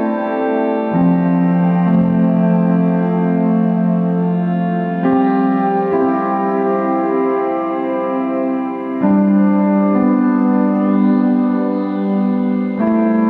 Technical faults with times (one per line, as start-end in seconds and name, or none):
none